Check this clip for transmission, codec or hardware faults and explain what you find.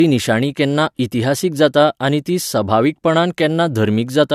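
One codec fault runs through the whole clip. Low-bitrate audio saved at a high bitrate: the speech carries the artefacts of an earlier encoding, with nothing above 14.1 kHz, likely because a low-bitrate encoding was re-saved as a large MP3 that cannot restore what was lost.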